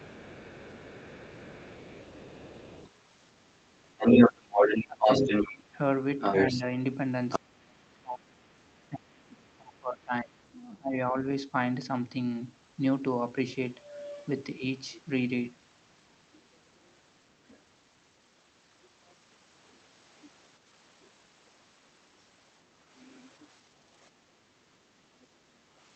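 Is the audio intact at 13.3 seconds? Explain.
Yes, at 13.3 seconds the speech plays through cleanly, with no dropout, click, distortion or other fault to be heard at that moment.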